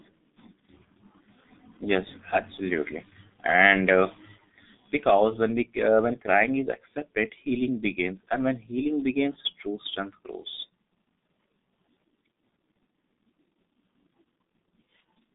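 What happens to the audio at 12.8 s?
At 12.8 s the speech carries G.723.1 codec damage, as it does throughout. Coding at 6.3 kbit/s in 30 ms frames, it refreshes its voice model slowly and keeps only about 200 Hz to 3.7 kHz, so the speech sounds heavily muffled and hoarse, with smeared consonants.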